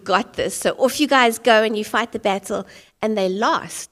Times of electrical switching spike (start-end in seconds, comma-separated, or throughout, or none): 0.62